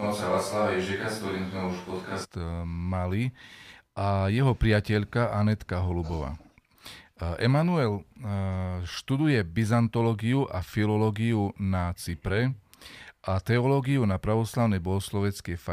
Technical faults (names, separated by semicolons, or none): switch to a distant microphone